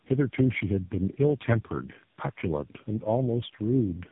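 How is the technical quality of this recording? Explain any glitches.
The speech is noticeably degraded throughout by tandem speech coding. From start to finish it sounds rough, muffled and warbly, with nothing above about 3.7 kHz. The chain points to four speech codecs in a row, ending in AMR-NB, each decoding and re-encoding the previous one's already damaged output. The warble and roughness are heavier than any single narrowband codec at a low bitrate would produce, because the losses from each stage stack up.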